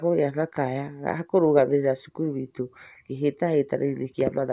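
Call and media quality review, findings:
No faults found in the speech on review, with no dropouts, distortion or timing disturbances heard anywhere in it.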